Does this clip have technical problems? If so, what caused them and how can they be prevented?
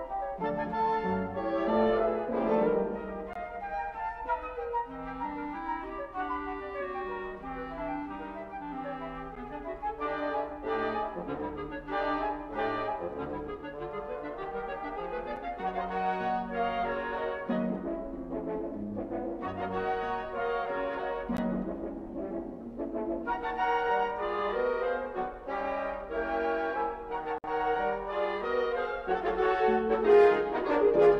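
Yes. There are gaps between stream segments at 3.33–3.36, 9.35, 15.36, 21.37 and 27.38–27.44 s, spaced 6 s apart. Each is a hard-edged silence of 5–58 ms where segment timestamps fail to meet. Unlike a dropout, no audio is missing: the sound resumes exactly where it stopped. Prevent it by writing contiguous segment timestamps or making the player join adjacent segments without inserting silence.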